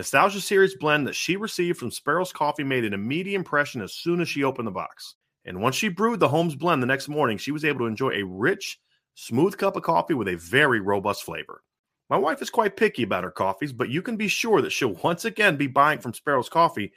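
No technical faults can be heard anywhere in the speech recording.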